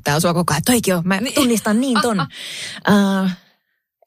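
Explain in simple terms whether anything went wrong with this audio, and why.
Nothing went wrong with the recording: the speech signal carries no audible technical fault at any point.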